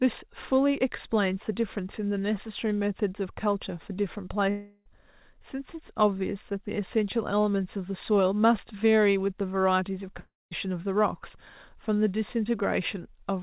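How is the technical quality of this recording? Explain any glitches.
The recording has two gaps, heard as concealed network loss over speech band-limited to 4 kHz by a G.711 mu-law call path. At 4.5–4.88 s and 10.2–10.53 s, a likely long network dropout occurs: about a third of a second never arrives, and the receiver stretches the last sound into a fading buzz or hiss before speech resumes.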